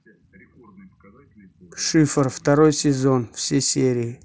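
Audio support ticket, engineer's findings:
No faults found in the speech. The Bluetooth mSBC headset codec path carries it as wideband audio up to 8 kHz, with the light graininess on louder sounds that this codec leaves.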